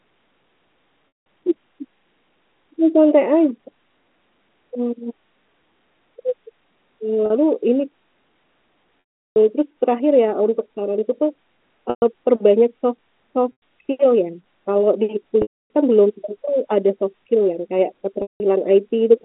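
Packet loss with pitch repetition breaks the speech at 1.08, 7.26, 9.06, 11.90, 13.52, 15.42 and 18.22 s, with gaps of 40 to 360 ms. The receiver loops the last pitch period, so the sound briefly holds and buzzes before fading. On a spectrogram these appear as frozen harmonic stripes tapering to silence, within a telephone band capped near 3.5 kHz.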